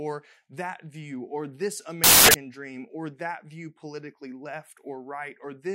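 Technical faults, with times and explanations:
2.04–2.34 s, samples built from the wrong bytes: the speech turns into loud, harsh broadband noise. Misassembled bytes push fast-changing low bits into each sample's large part.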